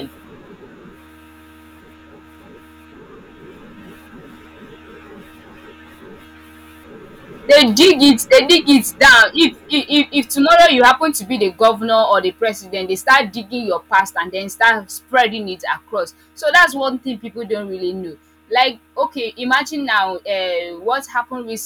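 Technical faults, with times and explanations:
Throughout: hard clipping. The speech is driven about 9 dB past what the stage can pass, so the loudest peaks, a small share of the samples, are sliced flat. The flattened tops show on the waveform and spray harmonics upward as vertical spectrogram smears, heard as harsh crackle.
0.14 s to 21.62 s: clock slip clicks. A faint, even rattle of ticks recurs roughly every 50 ms, hundreds in all, each a single-sample jump. The likely cause is two unsynchronised clocks drifting apart. On the spectrogram they form evenly spaced thin vertical lines, strongest under loud speech.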